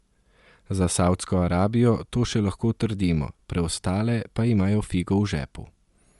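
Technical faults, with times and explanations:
Throughout: Bluetooth LC3 compression. The speech has plainly audible codec damage, with a grainy, breathy texture on the upper frequencies and no content above about 11.6 kHz. This is likely LC3, the Bluetooth LE Audio transform codec. The damage fits a stream near 48 kbps coded in 10 ms frames. At that rate the encoder cannot spend enough bits on the high spectrum, so that region is coarsely approximated, and the top of the band is likely set by the sample rate chosen.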